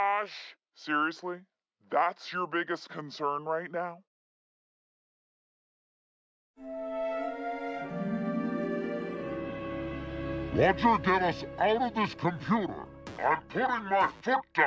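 Throughout the clip, samples are played back slower than they were captured, with no rate conversion, which is a wrong sample rate. This fits 24 kHz material played at 16 kHz. Everything runs at 0.67 times speed and 7 semitones lower, sounding slow and deep.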